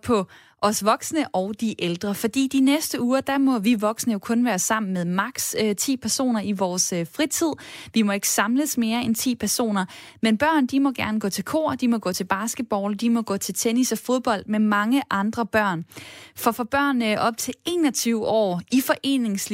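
Nothing in the recording stood out as a technical problem on listening.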